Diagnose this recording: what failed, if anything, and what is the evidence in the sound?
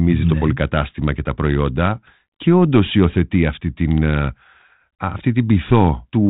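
Nothing in this speech recording points to a failure at any stage of the chain. The G.726 ADPCM path at 32 kbit/s is audible only as its normal 4 kHz band limit and a light graininess from coding each sample as a few bits of prediction error.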